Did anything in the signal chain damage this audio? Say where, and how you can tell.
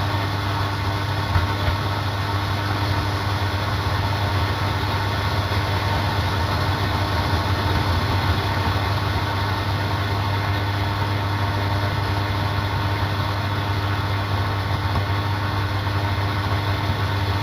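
Yes. Throughout, the top end sounds dulled, with a faint metallic shimmer on bright transients. That is imaging from linear upsampling in the sample-rate conversion stage. It fits a 16 kHz source raised to 48 kHz by straight-line interpolation, leaving mirror images between 8 and 16 kHz at about 30 dB below the signal.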